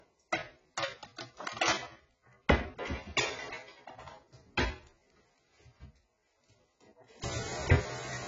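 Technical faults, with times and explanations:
Throughout, AAC compression: nothing is heard above 7.8 kHz, so the sound is dull and lacks air. Heavy damage runs through the whole clip. Steady parts warble, and bright, noisy parts turn fizzy and smeared. The likely cause is an AAC-LC encode at a very low rate, which fits about 16 kbps. The encoder lowers its cut-off to save bits. It then quantises coarsely, leaving gaps in the spectrum and rough noise fill.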